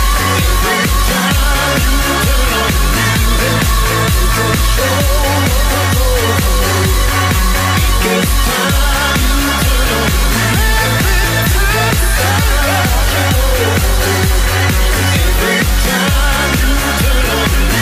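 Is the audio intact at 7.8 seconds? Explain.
Yes, the audio is intact at 7.8 seconds, with no dropout, click, distortion or other fault at that point.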